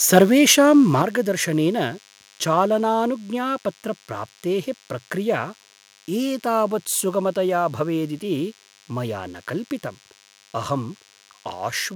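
Speech plays over a thin, steady buzz at 100 Hz with many harmonics. This is DECT cordless phone buzz: a nearby DECT handset or base sends a radio burst every 10 ms, and the audio circuit rectifies it. It sits roughly 30 dB below the voice. From 0.17 to 0.23 s the loudest peaks turn harsh and crackly, flattened about 2 dB past the converter's limit. The likely cause is microphone overload from input gain set too high. At 1.02 s voice and background drop together, suddenly, by 7 dB. That is the microphone volume stepped down, likely by the call software reacting to the clipped peak.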